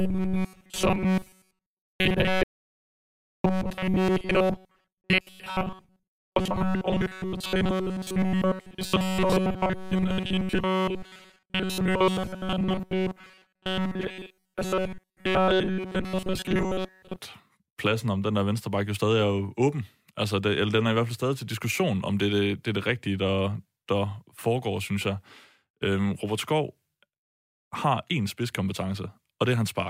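From 0.01 s to 17.18 s the speech becomes a rigid metallic buzz fixed near 188 Hz, lifting just before "pladsen om den der". This is robotic sound from repeated short buffers, likely a roughly 5 ms chunk replayed throughout. Between 2.43 s and 3.44 s the sound drops to complete silence for 1.01 s. This audio dropout to silence was likely caused by lost input being written as silence.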